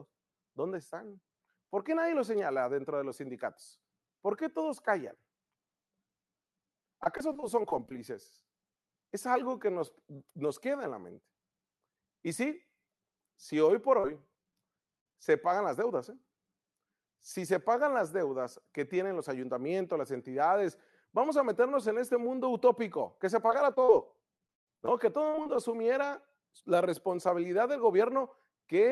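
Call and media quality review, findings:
Repeated packet loss (robotic sound), 7.03–8.46 s: 11 short gaps, longest 22 ms. Jitter buffer concealment continues the last sound across each hole, giving a choppy texture.

Repeated packet loss (robotic sound), 14.00–15.17 s, between "si hoy por" and "se pagan las deudas": 7 gaps, longest 58 ms, about 14% of the stretch patched.

Repeated packet loss (robotic sound), 23.47–25.60 s, after "mundo utópico que se": 14 gaps, longest 137 ms, about 20% concealed. This is the worst burst, with audibly missing pieces.

The call codec's top end stops near 12 kHz, which fits an Opus path at around 40 kbps.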